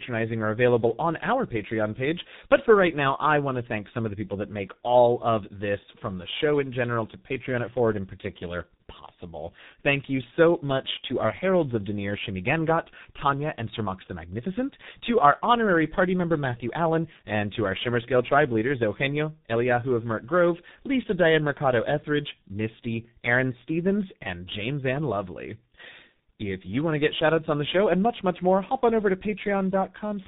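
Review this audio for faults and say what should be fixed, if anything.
Tandem speech coding runs throughout the clip, from start to finish. The speech sounds rough, muffled and warbly, with nothing above 3.8 kHz. The sound points to two speech coders in series: a CVSD leg, then a G.711 mu-law hop, then G.723.1 at about 6.3 kbit/s. Each coder re-encodes the errors the previous one left, so the damage compounds beyond what either would cause alone. Preventing it means negotiating one codec end to end, or using transcoder-free operation at network borders so speech is decoded only once.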